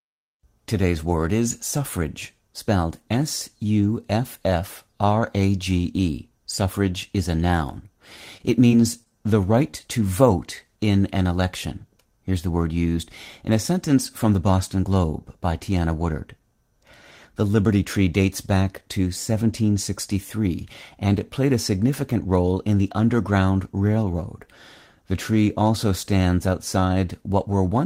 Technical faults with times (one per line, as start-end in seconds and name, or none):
8.37-9.13 repeated packet loss (robotic sound)
9.71-9.75 short concealed packet loss